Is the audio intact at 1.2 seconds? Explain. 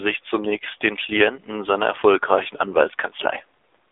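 No. At 1.2 s the speech is passing through an AMR narrowband mobile codec, as it does throughout. Everything is held to a 300 Hz to 3.6 kHz line band. The voice is rebuilt from a vocal-tract model, so it sounds plainly buzzy and synthetic, which fits a low bitrate near 7.4 kbps.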